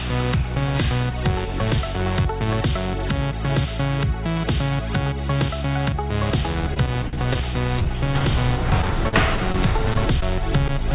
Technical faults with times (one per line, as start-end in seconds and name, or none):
6.74-10.82 scattered short gaps